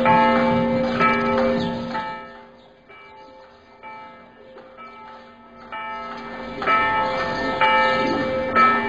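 Nothing technically wrong can be heard in this audio.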